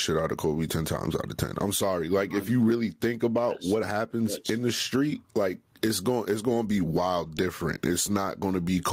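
Gain pumping runs throughout: quiet parts swell between phrases and duck by around 15 dB under louder speech, likely a fast limiter fighting excessive input gain.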